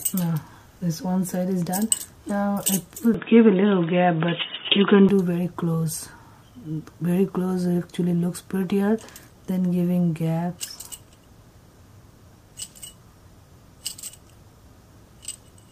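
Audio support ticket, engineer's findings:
Input switched to a poorer device, 3.14–5.09 s: abrupt boxy, dull band-limited sound, nothing above 3.8 kHz, roughly 5 dB level shift, no gap. Likely input device changeover.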